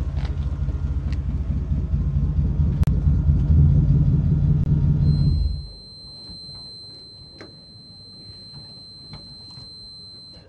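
At 2.84 s the sound drops to silence for 37 ms, then resumes. At 4.64 s it happens again, for 25 ms. These are likely Bluetooth stalls. Radio interference delayed packets, the receiving buffer emptied, and playback halted until the data arrived.

From 4.98 s to the end, a thin, steady feedback whistle sits behind the audio. It stays at 4.1 kHz, well below the main sound, and swells and fades slowly in level. The likely cause is a speaker-to-microphone loop hovering just at the edge of feedback.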